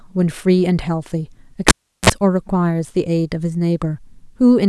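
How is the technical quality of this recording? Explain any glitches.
There's one real glitch here: a cable pulled and plugged in, running from 1.68 to 2.10 s. The speech cuts with a pop and drops to near silence for about 0.36 s while the connector is out. As it goes back in, only the tip touches first, so the ungrounded input picks up a quick 41 ms burst of 60 Hz mains buzz. Then a second pop hits as the full connection seats and the speech returns.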